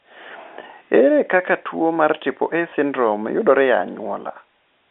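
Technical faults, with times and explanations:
2.7 s, packet loss with last packet repeated: one 20 ms packet dropped right before "syndrome yudore e", so the previous one replayed, giving a small blip.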